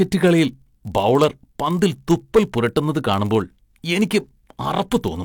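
A block size mismatch (padded) runs through the whole speech clip. One stage hands over blocks that fall just short of what the next stage reads, which fits a 1024-sample read, and the missing samples are filled with zeros. That puts a brief gap in every block, heard as a steady buzz at 46.9 Hz, the block rate. Because each block carries a little padding, the audio plays at 0.999 times its proper speed.

Hard clipping appears from 1.83 to 2.39 s, where the signal is driven about 6 dB past what a stage in the chain can pass. The peaks of the waveform are cut flat, and those squared-off tops add harmonics high in the spectrum. Across that stretch the louder moments of the speech pick up a distorted, crackling edge from the overload, and it lasts until the level drops back within range.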